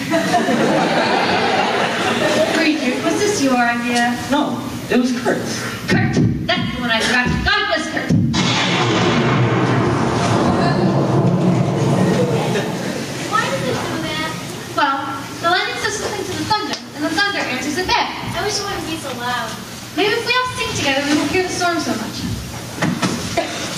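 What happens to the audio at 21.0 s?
At 21.0 s the audio is still caught in the gain pumping that runs through the whole clip: a fast limiter likely clamps excessive gain on each loud sound, so the gain swings by around 15 dB. The waveform looks flattened.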